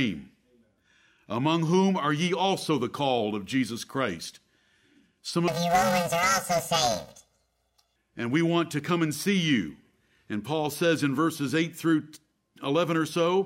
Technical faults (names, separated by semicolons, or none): planar audio read as interleaved